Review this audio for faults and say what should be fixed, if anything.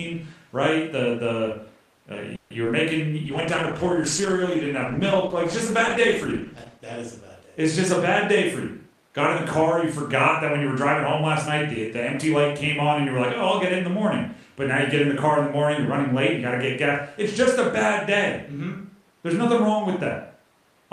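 At 2.35 to 2.52 s there's a call audio freeze. The last bit of sound gets stretched into a fading buzz for about 150 ms, then the speech picks up right where it stopped, so nothing is lost but the delay jumps by 150 ms. Packets were likely held up in transit and the jitter buffer ran dry. A slightly deeper jitter buffer target would ride out a stall like that.

Right after, at 2.64 to 2.67 s, there's a short concealed packet loss. About 20 ms of audio never made it to the decoder in time, and the receiver papered over the hole by extending the previous sound, so you get a quick smear or wobble. Adding a little forward error correction, such as Opus in-band FEC, would cover gaps this size.

From 3.26 to 8.07 s there's a call bitrate drop. The encoder falls from 40 to 13 kbps, bottoming out for about 3.5 s, and the speech goes coarse and muffled because the top end gets trimmed at that rate. 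A bitrate floor in the congestion controller, and a faster ramp back up, would soften this.

Then there are two jitter buffer speed-ups. The first, at 8.87 to 9.84 s, runs about 6% fast and drops roughly 70 ms. The second, at 10.58 to 13.90 s, runs about 3% fast and trims around 100 ms. The buffer had built up extra audio, so it snipped out pitch-period slices to catch up, and the speech runs faster at the same pitch, sounding hurried in the first. Draining the excess more gently over a longer stretch would make that catch-up much less noticeable.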